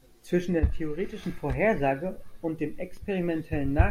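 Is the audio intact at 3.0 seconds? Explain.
No. Just before, at 2.97 s, there is a block of digital silence lasting about 1.3 ms, which fits a 64-sample buffer left unfilled. The sound drops to zeros and returns abruptly, heard as a single tick rather than an audible hole, unlike a faded dropout.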